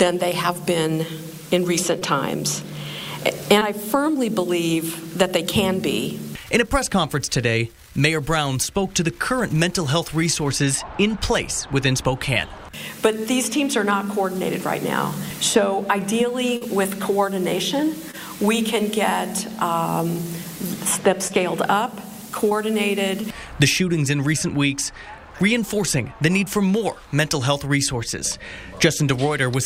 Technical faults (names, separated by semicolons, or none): short concealed packet loss